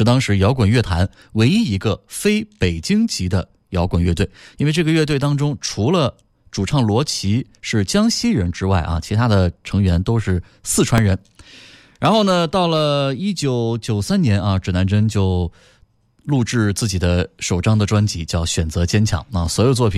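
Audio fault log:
10.98 s, invalid numbers at full scale: a calculation in the processing chain produced infinite or invalid values, and the output was clamped to its largest possible level for one processing block of about 1.45 ms, which fits a 64-sample block. The waveform jumps far beyond the speech's peaks and back almost at once, so the loud onset and release merge into a single sharp bang rather than a gap framed by two pops.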